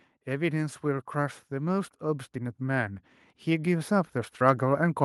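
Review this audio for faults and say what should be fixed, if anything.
Automatic gain rising from 0.25 s to the end: the gain control judged the input too quiet and kept turning up, so speech and background swell together. Set a proper fixed input level, or cap how far and how fast the automatic gain control may raise its gain.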